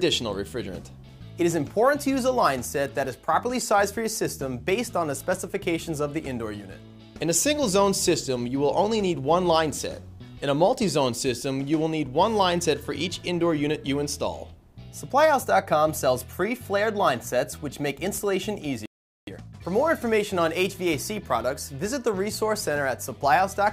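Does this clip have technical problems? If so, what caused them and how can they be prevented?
Yes. There is a playback stall from 18.86 to 19.27 s. The sound cuts out in mid-flow and stays silent for about 415 ms. It then resumes. The likely cause is that the player ran out of buffered data or its audio thread was blocked, so nothing reached the output until it recovered. Giving the player a deeper buffer and keeping its audio thread free of blocking work prevents this.

A time-compressed catch-up follows straight after, from 19.27 to 19.67 s. The sound plays at twice its normal rate but keeps its pitch. The player is cutting small pieces out of its backlog and cross-fading the joins to make up the time lost in the stall. Preventing the stall removes the need for this catch-up.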